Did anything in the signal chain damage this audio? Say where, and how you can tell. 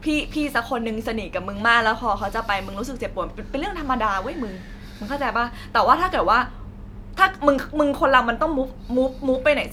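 No, nothing in the signal chain damaged this speech.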